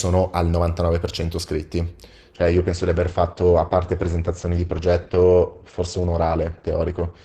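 At 2.36 s the adaptive stream drops to a lower bitrate, likely because the connection slowed, and stays there to the end. The speech quality changes abruptly, with no gap, and codec artefacts rise, which fits a fall from around 64 to 12 kbit/s Opus.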